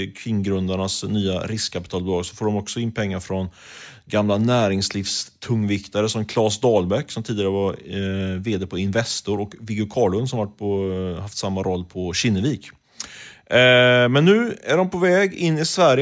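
Nothing in this recording of speech stands out as a technical fault; there's no point where anything goes wrong that a listener would notice.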